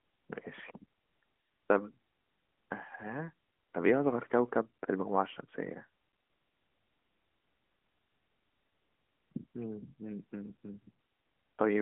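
No technical faults can be heard in this speech recording. It comes through an AMR narrowband mobile codec working normally, holding to a telephone band of roughly 200 Hz to 3.4 kHz with nothing above 3.7 kHz and only light codec colouring, which fits the 12.2 kbps mode.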